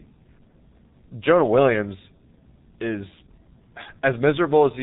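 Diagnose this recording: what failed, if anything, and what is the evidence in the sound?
G.723.1 codec damage runs through the whole clip, from start to finish, at the codec stage. The speech has no content above 3.8 kHz, so it sounds muffled, and the heavy coding leaves it hoarse with smeared consonants. The codec slices the signal into 30 ms frames and rebuilds each from a coarse, slowly updated voice model, which fits a rate near 6 kbit/s. Fine detail and fast transitions between sounds are simply not carried through.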